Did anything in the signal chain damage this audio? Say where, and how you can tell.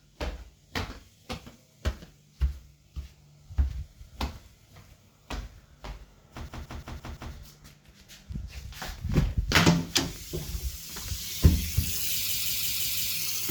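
Yes, a system hang loop at the driver or buffer stage: from 6.49 to 7.34 s and 12.29 to 13.14 s, one 0.17 s chunk (fits an 8192-sample buffer) repeats five times, a stutter at about 5.9 Hz.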